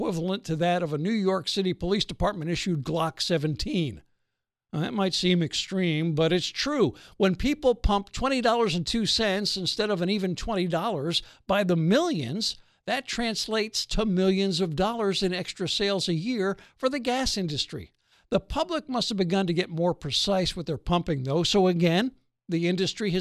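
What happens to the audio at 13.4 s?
At 13.4 s the speech carries straight through with no dropout, click, distortion or other audible fault.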